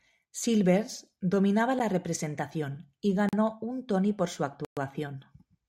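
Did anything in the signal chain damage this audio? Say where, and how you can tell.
Yes, at the driver or buffer stage: blocks of digital silence at 1.79 s, 3.29–3.33 s and 4.65–4.77 s (8.5, 40 and 120 ms), with hard edges, point to unfilled output buffers.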